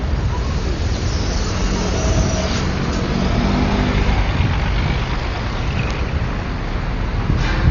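Throughout, the audio points to heavy Dolby Digital compression, likely at a low bitrate of around 40 kbps. The encoder has cut the band so that nothing survives above 6.9 kHz, and it has starved many frequency lines of detail. The sound is dull, with rough, fluttering noise clinging to its tonal parts.

At 5.91 s, a bit error spike occurs: a flipped bit throws a few consecutive sample values far off before they snap back. It is heard as a single sharp, broadband tick that has nothing to do with the surrounding sound.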